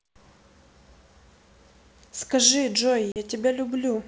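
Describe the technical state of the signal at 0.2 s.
At 0.2 s the speech is intact, carried cleanly through G.722 wideband telephone coding at 64 kbit/s with no fault audible at that moment.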